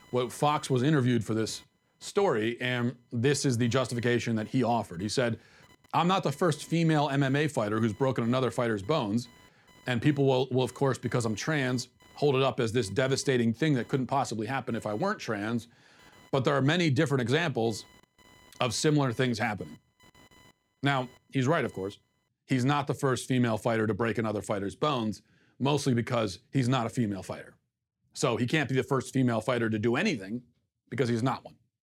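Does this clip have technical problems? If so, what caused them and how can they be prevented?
Yes. Computer activity noise runs from 0.0 s to about 22.3 s: a chirping buzz pulsing at around 1 kHz, roughly 30 dB below the speech, as processor and graphics load shift the shared audio ground. Unlike steady mains hum, it follows machine activity rather than the speech. An external audio interface or a USB ground isolator prevents it.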